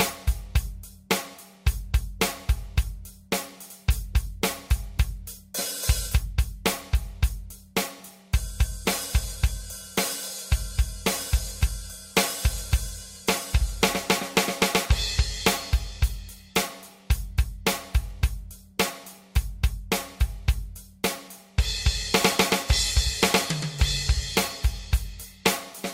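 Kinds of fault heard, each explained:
No faults can be heard anywhere in this recording.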